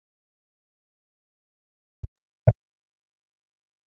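From the start to 0.97 s the speech sinks by as much as about 40 dB, thinning and breaking into pieces. This is likely speech suppressed in double talk: with both ends talking at once, the echo canceller mistook the near talker for loudspeaker echo and pulled everything down.

From 1.25 to 1.57 s the room sound drops out by about 37 dB for roughly a third of a second, then comes back. This is background gated by the echo canceller, which clamped the microphone hard while the far end played through the loudspeaker.

From 1.85 s to the end the speech again dips by up to about 40 dB and fragments, likely the same double-talk suppression returning. Across the clip the band stops at 8 kHz, consistent with an Opus call path.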